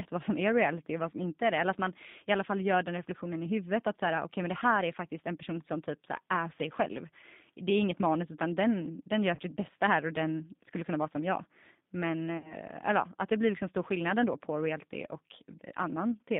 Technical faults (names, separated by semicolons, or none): G.729 codec; VoIP packet loss concealed by the speech codec